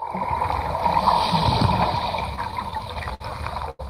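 From 2.36 to 3.22 s come repeated stalls (stutter): nine brief waits, the longest 60 ms, where the jitter buffer ran dry and the last sound was held. The audio drags unevenly, yet nothing is skipped, unlike packet loss. At 3.70 to 3.81 s a short stall from a late packet holds one sound for about 89 ms, a single stretched moment rather than a chain of hiccups.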